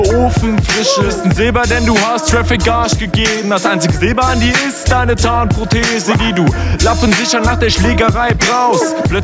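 Gain pumping runs through the whole clip, with the gain swinging by roughly 10 dB. This is likely from input gain set far too high, with a fast limiter clamping each peak and squashing dynamics. The call processing also leaves nothing above 8 kHz.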